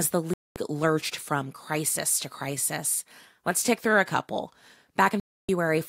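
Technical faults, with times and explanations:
0.34–0.57 s and 5.20–5.49 s, digital broadcast dropout: the receiver stopped getting decodable frames, either because the signal was lost or because frames failed their checksum, and it muted until clean frames came back. The speech cuts to silence for about 0.23 s, then returns at "lurched from crisis to", and later drops out again for about 0.29 s. These gaps fit runs of roughly seven and nine frames, and the speech sent during each hole is gone.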